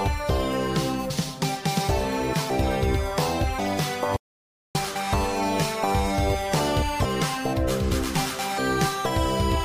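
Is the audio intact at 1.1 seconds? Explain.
No. At about 1.1 s compressed frames are skipped: the decoder has nothing to play for roughly ten of its frames, which fits a frame length near 23 ms, so the audio leaps forward by about a third of a second. The join is heard as an abrupt jump in the sound. A spectrogram shows an abrupt discontinuity in the patterns at the seam, and the waveform's envelope changes suddenly with no gap.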